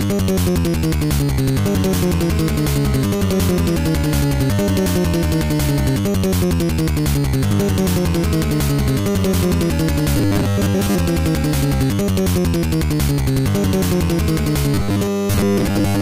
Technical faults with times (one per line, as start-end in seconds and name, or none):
10.17-10.95 robotic sound from repeated short buffers
14.74-16.01 robotic sound from repeated short buffers